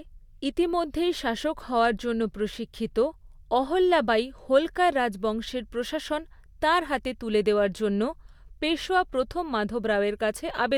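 Nothing in this recording stands out as a technical fault; it just runs along without anything going wrong that a listener would catch.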